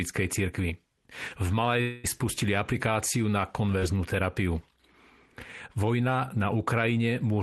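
From 1.81 to 2.06 s, just before "spustili aplikáciu na", a long network dropout is the likely cause. For about a quarter of a second no fresh audio reached the receiver, so it kept extending the last sound rather than going quiet. The whole gap, roughly 220 ms, is filled this way, with no stretch of true silence. What you hear is a synthetic, smeared continuation that decays, and then the speech resumes with that portion simply missing.

At 3.80 s, right after "spustili aplikáciu na", comes a short concealed packet loss. About 20 ms of the stream failed to arrive at the decoder in time, and the receiver patched the hole by extrapolating from the preceding sound before crossfading back into the real signal. The result is a brief wobble or smear lasting a few hundredths of a second. It passes within the Opus call path's roughly 12 kHz bandwidth, which fits a low bitrate around 20 kbps.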